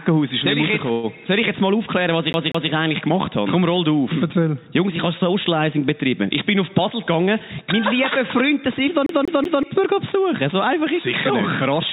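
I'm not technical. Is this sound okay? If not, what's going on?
No. There are three kinds of problem in this sound.

From 0.92 to 1.06 s there is a call audio freeze. For about a tenth of a second the last sound is stretched into a brief fading buzz or hiss, and then the audio picks up exactly where it stopped. The likely cause is network packets arriving late. Unlike a dropout, nothing is lost. The sound simply pauses and then carries on, slightly delayed.

From 2.33 to 2.71 s, and again from 9.06 to 9.63 s, there is a CD stuck on one turn. The same short slice of about 0.19 s plays over and over, twice in the first spot and three times in the second, with a tiny break at each jump. This is different from the freeze because the sound repeats the same piece rather than stretching it. It gives the quick, even stutter of a skipping disc.

From 6.90 to 7.73 s there is a jitter buffer speed-up. 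The receiver trims away very small bits of sound to catch up after a delay, roughly a tenth of a second in total. That makes this stretch run about 10% fast, so it sounds rushed. The pitch stays the same, which is how you can tell it apart from a tape or record being played too fast.

Throughout, the sound has the muffled, phone-line quality of a call codec, with nothing above 4 kHz.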